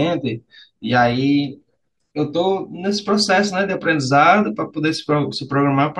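Nothing in the speech stood out as a fault on listening.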